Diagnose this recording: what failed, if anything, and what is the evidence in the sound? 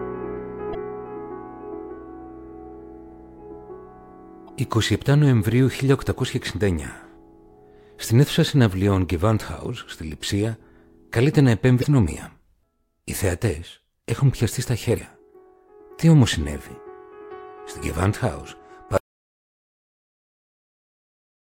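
Two short bursts of damaged data in the compressed stream point to the codec and storage stage, at 0.71 to 0.75 s and again at 4.45 to 4.49 s. Each lasts about 40 ms and sounds like a brief squawk or blip. Corrupted bytes made the decoder misread frames, lose sync and resume at the next valid header. On a spectrogram each appears as a thin vertical smear of broadband energy. The waveform shows a short burst unrelated to its surroundings.

An audio dropout to silence begins at 18.98 s and runs to the end of the file. The sound cuts off in mid-flow, and what follows is silence with no room tone, so the input signal was lost while the recorder kept writing. The likely cause is a disconnected device or failed input link at the capture stage. On the waveform this is a dead-flat line. On the spectrogram it is solid black across all frequencies.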